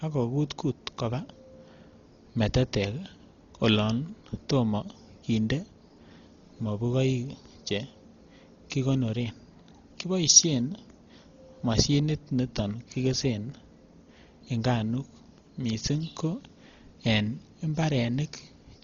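From start to finish, the speech has been squeezed through a codec starved of bits, likely Dolby Digital compression at a rate that fits roughly 32 kbps. With so few bits, the encoder cuts off the band, so nothing remains above 7 kHz, and it leaves many frequency lines empty for the decoder to fill with noise. The damage is heavy: the voice sounds dull and muffled, with a rough, fluttering grain clinging to its tones.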